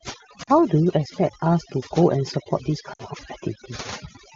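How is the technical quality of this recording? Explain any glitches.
The recording has two problems: heavy-handed noise reduction across the whole clip, and two short dropouts from lost AMR speech frames. The wideband coding underneath sounds clean.

Overdone noise removal runs from start to finish. A noise reduction stage was set far too aggressively. It pushes any frequency band near its noise estimate down hard or switches it off. The softer parts of the speech fall below that line too. The background drops and breaks up into twinkling specks.

Lost AMR speech frames occur twice. The first is at 0.43 to 0.49 s, about 40 ms, which fits two lost 20 ms frames. The second is at 2.93 to 3.03 s, about 60 ms, which fits three. Transmission errors corrupted these frames. The decoder then repeated the last good pitch and vocal tract settings at falling gain. Each gap is heard as a quick fade to near silence. 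The speech returns briefly weak or rough.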